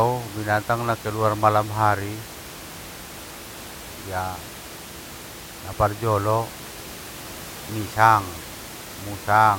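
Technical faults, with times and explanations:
No technical faults are audible in this recording.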